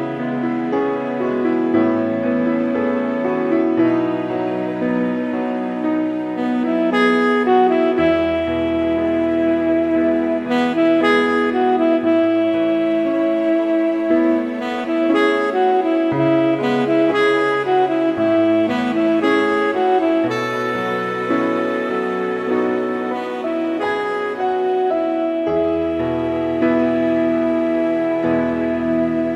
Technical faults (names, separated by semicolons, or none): none